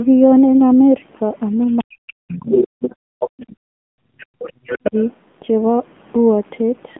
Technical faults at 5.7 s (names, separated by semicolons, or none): AMR narrowband mobile codec